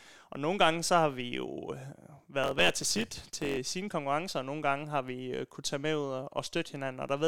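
A speech clip with a block size mismatch (truncated) from 2.43 s to 3.57 s, ending just before "sine konkurrencer og nogle". Over that stretch a buzz at about 91.9 Hz sits under the speech, and the delivery runs about 1.07 times fast while the timbre stays. One stage writes blocks longer than the next stage reads, which fits 512-sample blocks, so the tail of each block is discarded and the cut repeats at the block rate.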